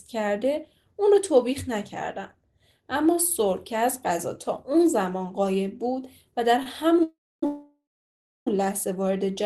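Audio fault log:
6.62–6.67 s, short stall from a late packet: The speech holds one sound for about 34 ms, with a faint buzz. A packet came late and the jitter buffer ran dry. The last sound was stretched until it arrived, so nothing is lost.
7.03–7.43 s and 7.45–8.47 s, call audio freeze: The speech stops and a fading buzz trails into silence. The first freeze adds 394 ms, with about 270 ms silent. The second adds 1011 ms, with about 660 ms silent. Each likely comes from packets held up in transit, which emptied the jitter buffer. The speech resumes where it stopped, so little is missing, but gaps are inserted.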